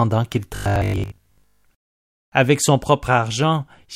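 Audio starved by too few incoming updates, likely refilled by repeating short buffers, turns this speech robotic from 0.56 to 1.64 s: a rigid 50 Hz metallic buzz, fitting a 20 ms buffer, replaces most of the sound.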